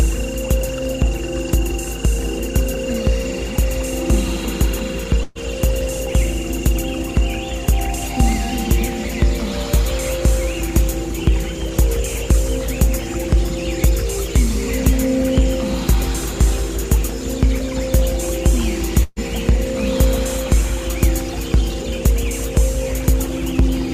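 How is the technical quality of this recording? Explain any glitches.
Two short glitches, both a burst of packet loss, at 5.23 to 5.38 s and 19.03 to 19.19 s. Each time about 120 ms of audio went missing. The receiver covered the hole by holding the last sound and fading it, for about 118 ms and then about 130 ms, the second ending in roughly 20 ms of silence. Playback then jumps ahead.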